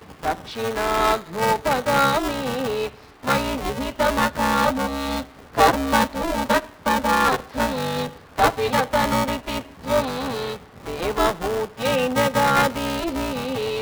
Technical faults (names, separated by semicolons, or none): buffer tearing